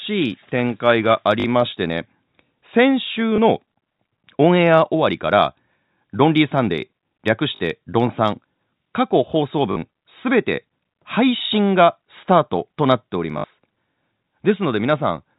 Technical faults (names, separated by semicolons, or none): packet loss with last packet repeated